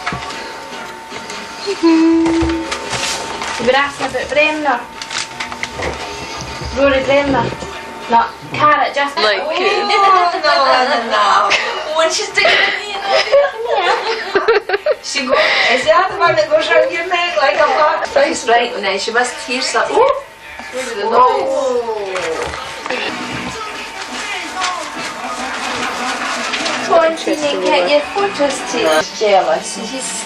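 Nothing technical trips up the sound anywhere here, so there's really nothing to flag.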